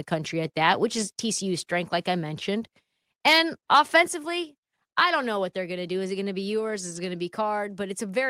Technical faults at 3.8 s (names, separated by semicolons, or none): microphone overload